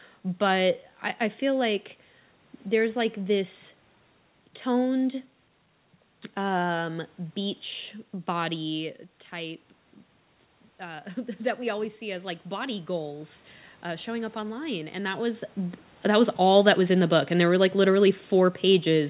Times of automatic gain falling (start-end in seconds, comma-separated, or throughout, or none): 16.07-19.10